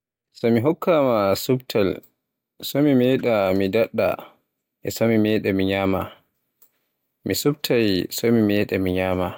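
A listen through the speech reveals no technical faults in the signal at any point.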